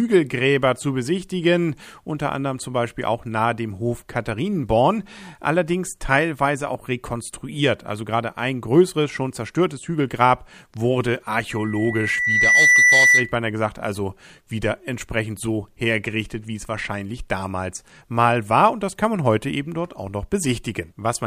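From 11.49 s to 13.36 s a 2 kHz tone swells over about a second into a squeal roughly 10 dB above the speech, ending before "gesagt also wieder entsprechend". This loudspeaker feedback squeal arises when the microphone hears its own loudspeaker and loop gain at 2 kHz exceeds one.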